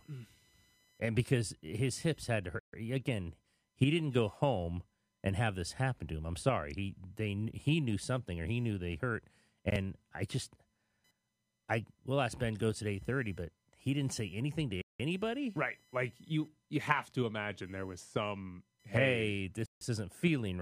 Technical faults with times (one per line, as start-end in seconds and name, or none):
0.00-20.62 computer activity noise
2.59-2.73 Bluetooth stall
14.82-15.00 Bluetooth stall
19.66-19.81 Bluetooth stall